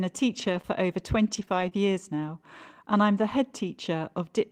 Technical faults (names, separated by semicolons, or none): scattered short gaps